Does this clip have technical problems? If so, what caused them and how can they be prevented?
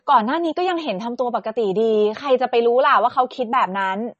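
Yes. Throughout the speech there is audible MP3 compression damage. Nothing is present above 8.3 kHz, and the sound has a watery, swirling quality with chirpy sibilants and softened consonant attacks. This is likely a starved MP3 encode, consistent with a bitrate of roughly 32 kbps. At that rate the encoder removes the treble above a fixed cutoff and drops weak frequency lines, which flicker in and out between frames. To prevent it, keep the recording in a lossless format or encode at 128 kbps or higher.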